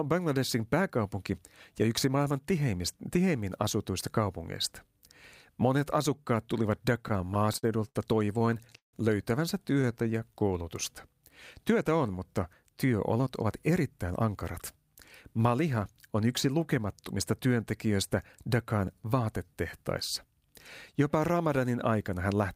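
Right after "asukkaat tulivat", from 7.03 to 8.95 s, the speech stutters and drags, catching on itself in a string of short holds. This is repeated stalls (stutter). Packets were arriving late or too slowly, so the jitter buffer kept running dry, about eighteen times across the span. Each time, the receiver extended the last sound until more audio arrived. The holds add roughly 430 ms, the longest about 162 ms, and make up around 22% of that stretch. Nothing is lost, but the delivery limps.

From 9.74 to 10.49 s the speech slows to 90% speed at unchanged pitch, with sounds drawn out. This is a jitter buffer slow-down. With its reserve low, the receiver repeated single pitch periods and pieces of pauses again and again, adding about 83 ms to rebuild its margin.

Inside that stretch, at 9.82 to 9.85 s, one sound is held a touch too long, with a slight buzz or dip. This is a short stall from a late packet. 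A packet missed its slot, so the receiver stretched the preceding sound by 15 ms and then continued from the same point, with nothing missing. The buffer's delay rose by 15 ms as a result.

After "on mutta", from 12.63 to 14.29 s, the speech hurries along at 109% speed while keeping its pitch. This is a jitter buffer speed-up. The buffer held more audio than its target, which fits delayed packets landing together. The receiver trimmed short runs of one or a few pitch periods many times over, cutting roughly 150 ms to bring the delay back down.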